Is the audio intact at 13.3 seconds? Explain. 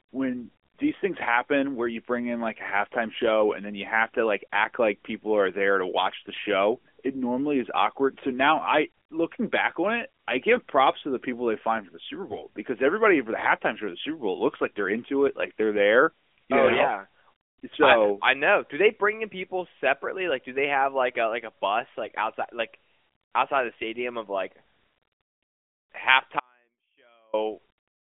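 Yes, at 13.3 seconds the speech is intact, with nothing interrupting or disturbing it at that moment.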